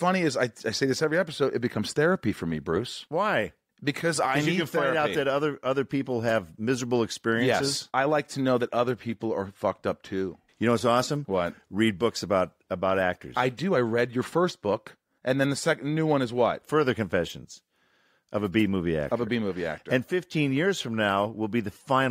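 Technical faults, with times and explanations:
No technical faults detected.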